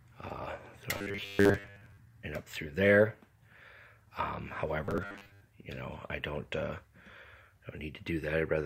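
From 0.94 to 1.97 s, and again from 4.85 to 5.41 s, there's robotic sound from repeated short buffers, likely from a 10 ms chunk replaying while roughly two-thirds of the real audio is dropped. That loop stamps a stiff, metallic 100 Hz buzz over everything.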